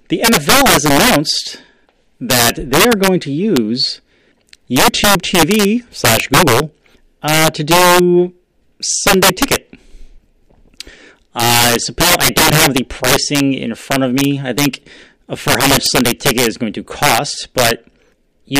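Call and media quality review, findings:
Integer overflow throughout speech: gain about 13 dB too hot wraps unclamped sums to opposite sign; about 3% of samples flip full-scale, giving violent cracks on loud syllables.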